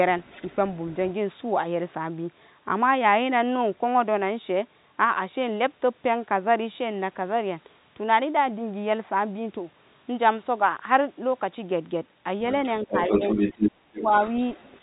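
Right at the start, from 0.21 to 0.55 s, there's a faint second voice sitting well under the talker, very roughly 25 dB down. That's the other side's voice leaking through, most likely the far end playing on a loudspeaker and the echo canceller not scrubbing all of it from the mic. It comes back much stronger from 12.63 to 13.71 s, roughly as loud as the talker, so the two voices overlap. Inside that stretch, from 12.84 to 12.94 s, the talker's level dips slightly, only a few dB, which is speech suppressed in double talk. The canceller likely couldn't separate its own talker from the echo and pulled the level down. That gets much worse from 13.71 to 14.12 s, where the talker drops out almost completely, by something like 35 dB. Then from 13.96 to 14.79 s the leaked voice returns at a moderate level, roughly 15 dB under the talker. All of it sits inside the narrow telephone band of the G.711 line.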